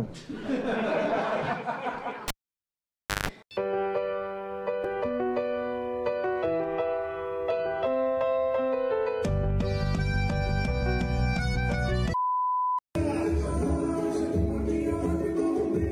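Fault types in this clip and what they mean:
Cable pulled and plugged in: a pop at 2.28 s, about 0.96 s of near silence, a 0.16 s burst of 50 Hz mains buzz, then another pop as a live cable is reseated.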